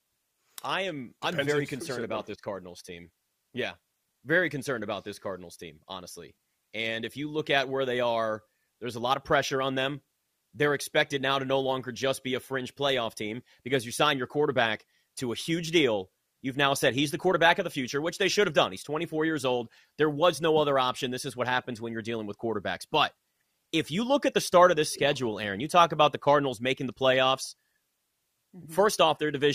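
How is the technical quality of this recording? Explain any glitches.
Nothing in this speech recording jumps out as a glitch, so there's honestly nothing here that needs explaining.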